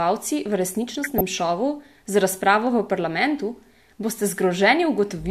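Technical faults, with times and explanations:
0.95–1.21 s, DAB burbling: burbling sits over the speech just before "šovu z razpravo v". Bit errors slipped past error correction, across a dozen or so damaged frames.
3.58 s, DAB burbling: a brief burble right after "z razpravo v parlamentu", from a few corrupted frames.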